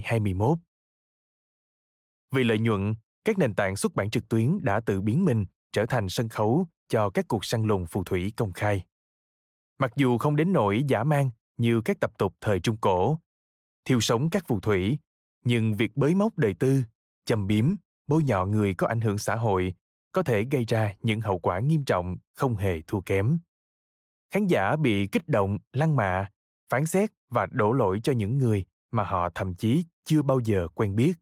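No audible technical faults.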